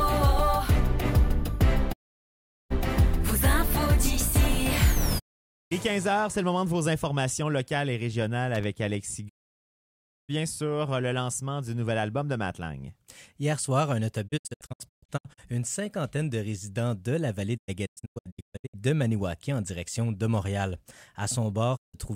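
At 1.92 to 2.72 s and again at 5.18 to 5.73 s, a digital broadcast dropout mutes the sound with a 20 ms fade. The receiver has lost frames or rejected them as corrupt, so whatever was sent in those gaps is gone. At 8.55 s, a loose connector crackle gives about 90 ms of irregular scratching as a worn contact rapidly makes and breaks. Dropouts return at 9.28 to 10.31 s, the longest silence, and again at 21.76 to 21.96 s. Between 14.27 and 15.40 s and between 17.56 and 18.76 s, the muting is broken up into several short holes, none longer than 128 ms.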